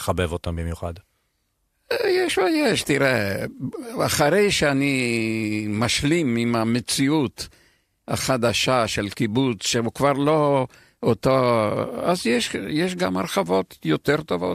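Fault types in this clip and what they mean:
AAC frame loss with concealment: About 20 ms of coded audio, roughly two frames, goes missing at 3.52 to 3.55 s, and the decoder patches the hole by reusing the spectrum it last decoded instead of leaving a gap. The speech therefore doesn't drop to silence or click as a plain dropout would. It turns briefly smeared and blurred, a patch too short to fade, set against the faint coding texture of what is likely AAC-ELD at 64 kbps.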